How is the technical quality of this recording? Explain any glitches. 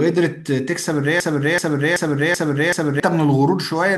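Speech with a broken-record loop from 1.20 to 3.00 s: a 381 ms fragment repeats five times back to back, likely from a stalled player or stream resending its last buffer. The waveform shows identical repeating blocks, and the underlying speech is lost.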